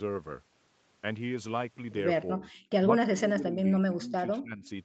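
Speech whose level sinks twice: a short dip from 2.34 to 2.5 s, then a longer stretch from 3.01 to 4.68 s where the voice is pulled down, by around 15 dB at its deepest, for about a second and a half in total. This is speech suppressed in double talk. It is likely the result of the far side talking at the same moment, so that the echo canceller could not tell this talker apart from its own loudspeaker echo and turned everything down together. Right at the end of that stretch, from 4.65 to 4.69 s, a faint scrap of the voice returns about 253 ms late and roughly 30 dB below the speech. That is likely an echo leak, where sound from a loudspeaker reached a microphone, slipped past the canceller and was sent back. Throughout, the call path limits the audio to 8 kHz.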